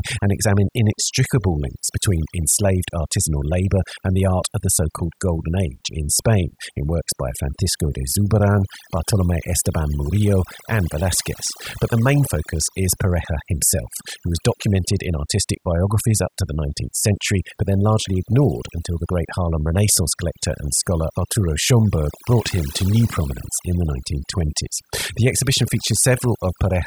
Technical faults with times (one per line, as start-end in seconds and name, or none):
0.00-26.86 overdone noise removal